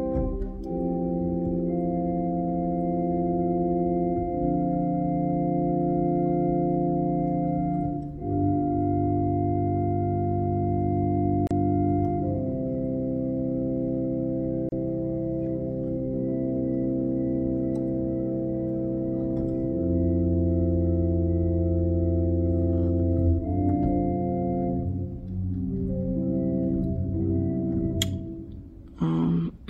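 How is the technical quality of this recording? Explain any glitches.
Two short dropouts mar the recording, both gaps at a join of encoded pieces. At 11.47 to 11.51 s and again at 14.69 to 14.72 s, separately encoded segments were spliced without trimming their encoder start delay and end padding. The sound halts for about 37 ms, then 32 ms, with softened edges, and resumes exactly where it stopped.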